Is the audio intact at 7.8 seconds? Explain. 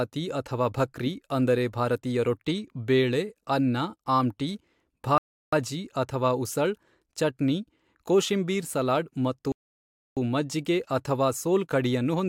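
Yes, the speech at 7.8 s plays through cleanly, with no dropout, click, distortion or other audible fault at that moment.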